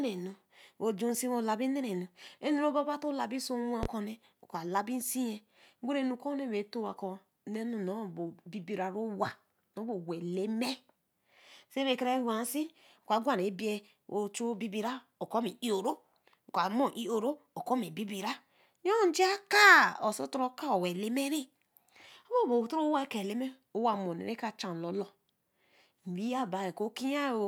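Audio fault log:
3.83–3.87 s, loud pop: one sharp pop of about 40 ms jumps out roughly 15 dB above the speech, which keeps going underneath. It's most likely a quick voltage spike, say from static or a switch, punched straight into the signal.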